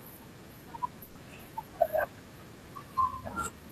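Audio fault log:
1.03–1.17 s, burst of packet loss: about 120 ms of the speech stream failed to arrive in time, and the receiver concealed the gap by extending the last decoded sound while fading it down. The result is a brief held buzz or fading hiss rather than silence. When the stream resumes, playback jumps ahead, so roughly 120 ms of the original speech is simply missing.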